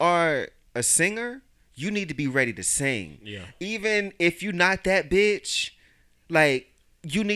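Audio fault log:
No faults heard anywhere in this speech recording.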